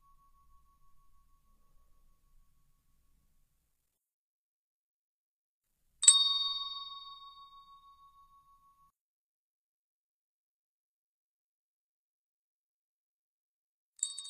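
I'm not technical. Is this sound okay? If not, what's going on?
No. One channel inverted, from about 8.9 seconds to the end: at that point the sound suddenly becomes much quieter, as if most of it has drained away. The likely cause is that one side of the stereo signal got flipped upside down, so when the two sides are combined, the parts they share cancel each other out. What's left is only the small difference between the left and right sides.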